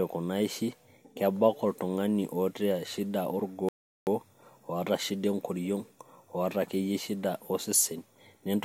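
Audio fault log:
3.69–4.07 s playback stall: the speech cuts out in mid-flow and the output falls completely silent for about 0.38 s before resuming. The gap is too long and too abrupt to pass for a natural pause, and the sound picks up as if the flow had simply been frozen. The likely cause is the player running short of buffered data, or its output thread being blocked, so that nothing reached the output until it recovered.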